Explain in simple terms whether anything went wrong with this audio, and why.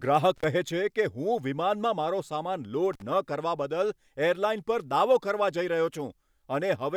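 A loose connection, called intermittent contact, briefly broke the signal twice in this speech clip, at about 0.36 to 0.44 s and 2.93 to 3.02 s. Each time the sound cuts out for roughly 50 ms, with a crackle as the contact opens and closes.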